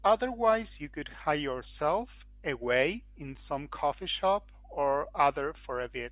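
Nothing in the speech signal points to a technical fault at any moment: level, continuity and tonal balance hold steady throughout.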